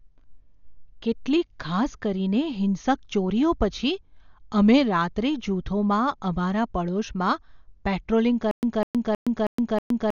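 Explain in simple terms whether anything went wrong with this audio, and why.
Dolby Digital compression runs through the whole recording. The speech sounds dull and muffled because nothing above 6.9 kHz survives. It was likely squeezed hard by this codec, which trims the high end and fills missing detail with a rough, fluttering hiss.

A stutter with silent gaps starts at 8.51 s and lasts to the end. A snippet of about 0.2 s plays five times, each followed by about 0.12 s of dead silence. The playback likely stalled and kept replaying its last piece, so the sound that should have followed is lost.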